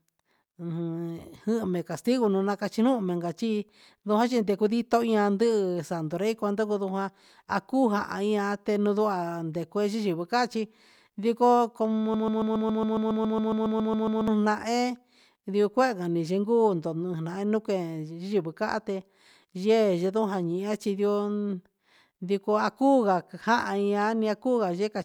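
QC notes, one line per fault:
12.14–14.28 s, broken-record loop: a 138 ms slice of speech repeats 15 times back to back, giving a stutter for just over two seconds. Likely the player or stream stalled and kept replaying its last fragment, so whatever came in that gap is lost.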